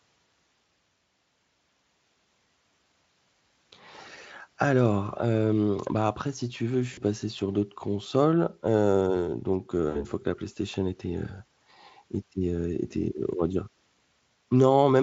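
A brief buzzy or noisy smear that fades out at 6.93 s, after "si tu veux je", and again at 9.89 s, after "d'autres consoles heu donc". This is VoIP packet loss concealed by the speech codec. The Speex decoder extrapolated its last pitch and filter, at falling gain, across 40 ms and then 60 ms of missing audio, which fits two and three lost 20 ms frames.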